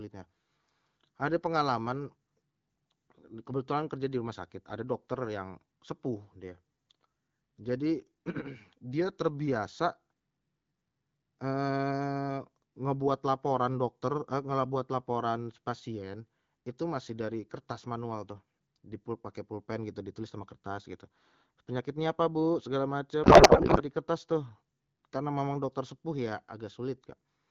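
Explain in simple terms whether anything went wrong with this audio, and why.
A codec payload misread happened from 23.23 to 23.83 s: the sender packed its AMR data one way (octet-aligned) and the receiver unpacked it another (bandwidth-efficient). For that moment, between "apa bu segala" and "di kertas tuh", the speech turns into garbled warbling noise.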